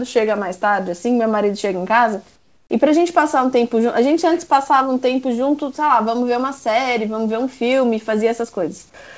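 From 2.36 to 2.70 s, about 340 ms, the real room background vanishes. A steady, featureless hiss takes its place, about 10 dB quieter. This is comfort noise in place of the background. The likely cause is that the sender paused transmission and the receiver synthesised filler noise.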